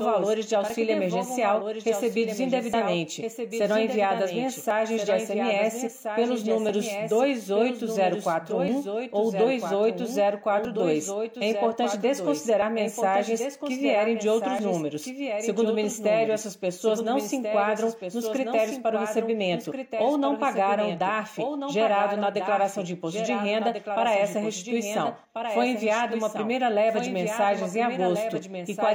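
The whole recording carries a doubled audio track: a full-band second copy about 5 dB quieter follows roughly one and a half seconds behind, with no decay or room colouring, likely from the same audio being captured again through a slower path. Separately, overlap between stream segments causes short clicks or skips at 0.70–0.74, 2.74, 4.71–4.74, 6.69–6.73, 8.68, 10.65–10.67, 12.62 and 14.59–14.61 s. They recur about every 2 s, consistent with 2-second segment boundaries whose timestamps overlap, so the player trims up to about 40 ms of non-duplicated audio and the waveform jumps.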